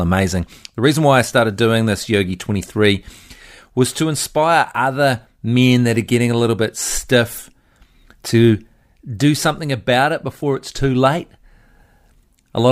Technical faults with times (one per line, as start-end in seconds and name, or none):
none